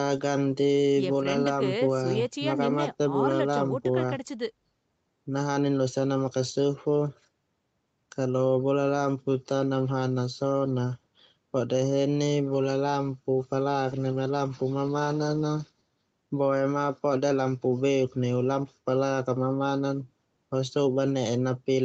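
Speech with no technical faults to report.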